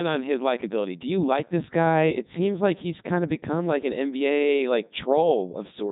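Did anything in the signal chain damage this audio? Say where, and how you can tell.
Yes, at the codec. Throughout, the speech is robotic and buzzy, with nothing above 3.8 kHz. This is heavy Codec 2 vocoder damage: the voice is rebuilt from sine waves rather than carried as a waveform.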